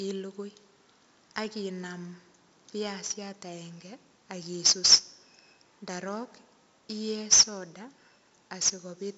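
A gritty hiss rides on every loud stretch of the speech throughout, attacks sound roughened, and nothing remains above 7.8 kHz. This is heavy 4-bit ADPCM compression: coarse predicted steps lag sharp onsets, and the band limit fits a 64 kbps stream.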